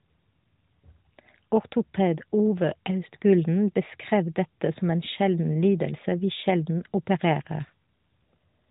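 Nothing goes wrong anywhere in this speech clip; it simply has the ordinary sound of an AMR narrowband mobile call at 12.2 kbps, with the top end stopping around 3.8 kHz, just as that codec is meant to.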